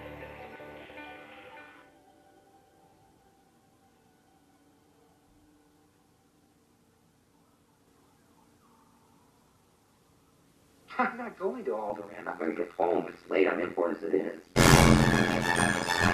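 From 11.9 s to the end there's overlap-add ripple. The windowed frames were rejoined with an overlap that doesn't sum to constant gain, so the level pumps by about 60 dB around a hundred times a second. It sounds like a harsh, metallic buzz with extra tones around each note.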